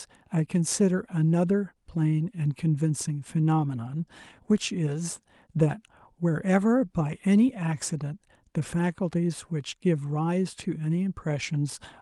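No technical faults are audible.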